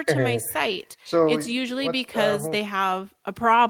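Nothing stood out as a technical fault on listening to this speech recording.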